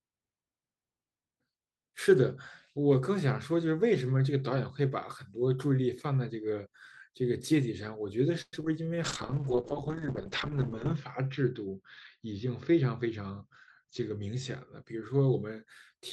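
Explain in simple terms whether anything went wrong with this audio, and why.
Yes, a few things go wrong in the second half of this speech clip.

From 8.41 to 8.67 s there is repeated packet loss, the robotic sound kind. Pieces of the audio went missing five times in about a quarter of a second. Each gap was patched by stretching out the sound just before it. The longest gap was about 114 ms. Most of that short stretch is patched-in sound, so it comes out choppy.

From 9.04 to 14.90 s there is a call bitrate drop. The connection seemed to get worse, so the sending side squeezed the speech into far less data. To save data it also cut away the higher tones, keeping sound only up to about 8 kHz instead of about 20 kHz. The speech turns dull, muffled and a bit rough. It sits at its worst for almost two seconds before improving.

Inside that stretch there are two jitter buffer speed-ups. The first runs from 12.45 to 13.42 s, the second from 13.85 to 14.35 s. 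Audio had piled up waiting to play. To catch up, tiny slices were cut out again and again, about 50 ms in total each time. The pitch stays the same, but the speech runs about 5% faster in the first and about 10% faster in the second, so it sounds hurried.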